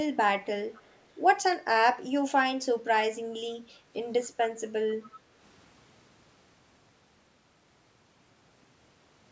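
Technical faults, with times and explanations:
0.73–1.05 s and 1.52–1.56 s, echo leak: a faint copy of the speech trails about 264 ms behind, roughly 30 dB down in the first stretch and about 20 dB down in the brief second scrap. It's likely a far-end speakerphone whose echo canceller let some residue through.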